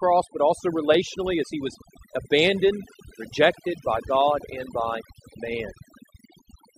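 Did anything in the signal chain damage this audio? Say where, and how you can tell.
Yes. The damage comes from a processing stage, and it is overdone noise removal applied across the whole speech clip. Between phrases the background drops to near silence, dotted with twinkling specks. A noise reducer was set too strong. It pushes individual frequency bands far down whenever they sit near its noise estimate. Quiet parts of the speech fall below that line and vanish along with the noise.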